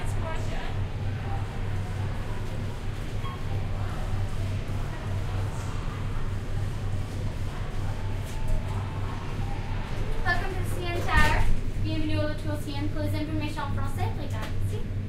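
No technical faults can be heard anywhere in this audio.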